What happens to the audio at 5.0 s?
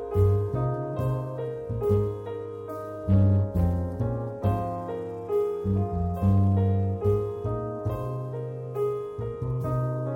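Nothing goes wrong at 5.0 s; the audio runs on intact through that moment.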